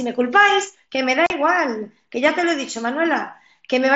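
At 1.26 s the speech drops out abruptly for about 40 ms, leaving a short hole with hard edges at 1.26 and 1.30 s. This is unconcealed Bluetooth headset packet loss: a run of voice packets between headset and phone never arrived, about five of them judging by the gap's length, and nothing was done to patch the hole. The mSBC headset codec carrying the link can still be heard around the gap as a light graininess on louder sounds.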